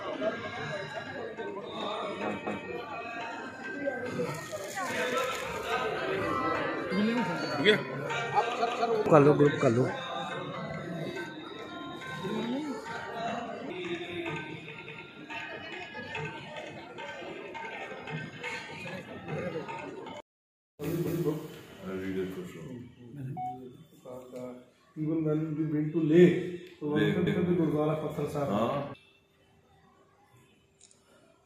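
The audio has overlapping chunks: at 2.47, 8.67, 14.87, 21.07 and 27.27 s, about 200 ms of sound plays twice, giving a short stutter every 6 s. It points to the stream being cut into 6-second blocks that each start slightly before the previous one ends.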